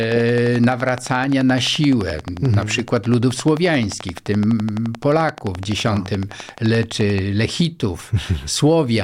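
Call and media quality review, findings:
Train of clicks, 0.03 to 7.19 s: regular ticking at 11.6 per second, roughly a hundred clicks, peaks about 10 dB above the speech, audible in pauses too. Likely interference from nearby equipment or a faulty connection or power supply. Spectrogram: evenly spaced thin vertical broadband lines. Waveform: matching spikes.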